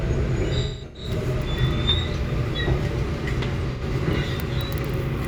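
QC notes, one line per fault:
0.61–1.10 s, AAC frame loss with concealment: a smeared, noisy, phasey stretch as the decoder repeats the last good spectrum with scrambled signs. About 341 ms of audio is lost in bursts spread over roughly 430 ms, which points to around eight lost frames. The longest gap is about a fifth of a second.
3.72–3.82 s, AAC frame loss with concealment: a short smeared, noisy blip where roughly 85 ms of audio, likely two frames, was rebuilt from the preceding spectrum.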